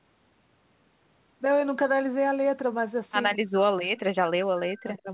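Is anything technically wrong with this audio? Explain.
Yes. Speech suppressed in double talk occurs from 3.29 to 5.09 s. Both ends likely spoke at once, and the echo canceller, unable to separate this talker from loudspeaker echo, attenuated everything. For roughly one and a half seconds the speech dips and breaks up, falling by about 40 dB at its deepest.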